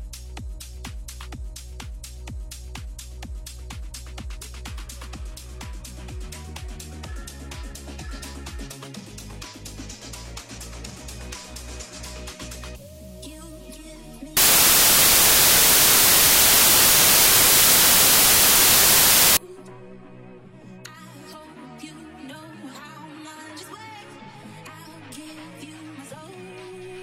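From 14.37 to 19.37 s, samples are built from the wrong bytes. Misassembled bytes push the rapidly changing low bits to the top, producing loud, harsh broadband noise.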